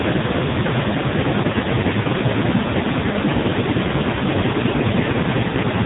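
From start to finish the speech runs through an AMR narrowband mobile codec, and it's heavily squeezed. Nothing gets past about 3.8 kHz, so it's dull and phone-like. The voice turns buzzy and synthetic, which points to one of AMR-NB's lowest modes, around 5.15 kbps.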